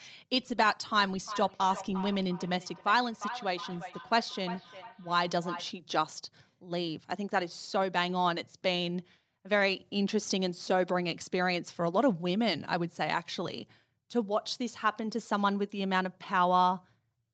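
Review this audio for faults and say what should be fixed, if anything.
From 1.26 to 5.77 s there is feedback echo between two devices. One device in the room plays back what the other's microphone sent, and that microphone picks it up again, so the speech returns roughly every 0.4 s at up to about -11 dB relative to the original. Room reverberation smears into one decaying tail, but these repeats arrive as distinct copies at a fixed spacing. To prevent it, mute the speaker or microphone on one of the two devices in the room, or use headphones.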